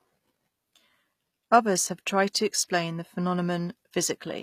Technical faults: HE-AAC compression

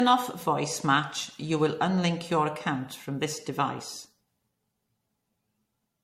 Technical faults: generation loss

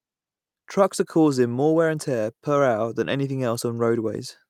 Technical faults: none

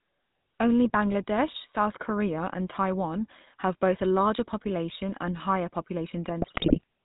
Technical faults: GSM full-rate codec; GSM bit errors

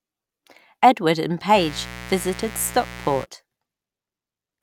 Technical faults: mains buzz

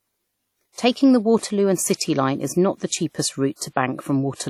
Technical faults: WMA compression; pre-echo

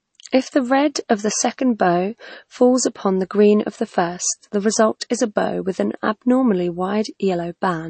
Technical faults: MP3 compression

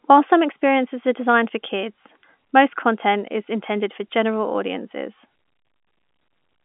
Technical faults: none

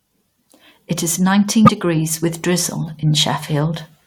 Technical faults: damaged data in a compressed stream

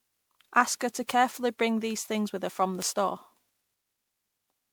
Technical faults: generation loss; bit error spike

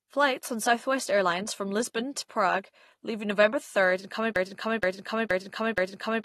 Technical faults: AAC compression; broken-record loop

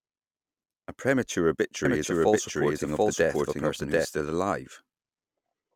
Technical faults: doubled audio track

